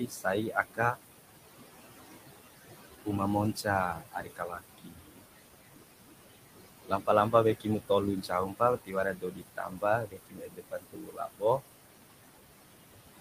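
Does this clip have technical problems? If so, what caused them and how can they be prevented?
Yes. Noise suppressor artifacts run through the whole clip. The room noise, about 9 dB under the speech, is pushed down by about 19 dB between phrases and swells back beneath them. A spectrogram shows a pumping noise floor. Lowering suppression strength or reducing room noise at the source prevents this.

Speech cut by the noise suppressor occurs at 0.0–0.98 s, 3.55–5.22 s, 6.88–7.9 s and 8.22–11.61 s, where soft speech was treated as noise and dropped by about 17 to 21 dB, most heavily across nearly two seconds of the last stretch. The waveform shows faded consonants and tails. Slower release settings prevent it.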